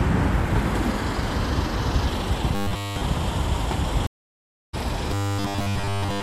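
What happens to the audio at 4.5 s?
A stream reconnect runs from 4.07 to 4.75 s. The connection dropped, leaving about 0.67 s of silence, then the player rejoined mid-stream with a fresh decoder, so the sound resumes roughly half a second further along than where it stopped, skipping that stretch.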